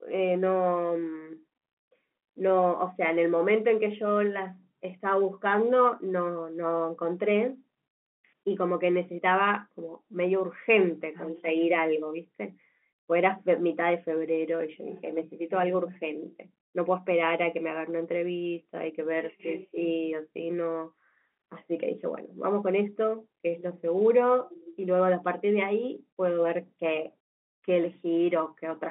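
No technical faults are present.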